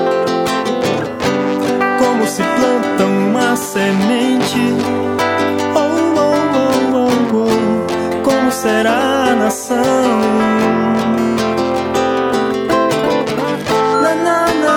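Nothing technically wrong can be heard in this audio. No fault turns up anywhere in it, so there are no times or causes to report.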